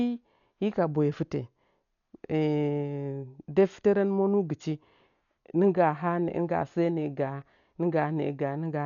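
Speech throughout, and it's dull the whole way: nothing gets above about 6.9 kHz, with a rough, fluttering noise clinging around the voiced parts. That pattern points to Dolby Digital compression, likely. Starved of bits, the encoder narrowed the band and left many frequency lines with no real detail, so the decoder filled them with noise. The damage is heavy, which fits a stream of around 48 kbps.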